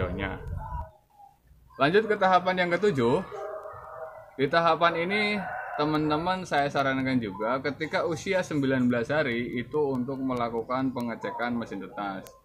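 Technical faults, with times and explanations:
0.27–12.27 s, word clock ticks: sharp ticks about every 0.2 s as unlocked clocks slip, each pointing to one sample dropped or repeated, roughly 100 ppm apart.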